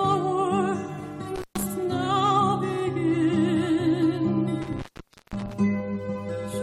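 Intermittent contact: a loose plug or cable opens twice, cutting the sound with edge crackle and faint hiss, briefly at 1.36–1.63 s (118 ms) and longer at 4.62–5.53 s (506 ms).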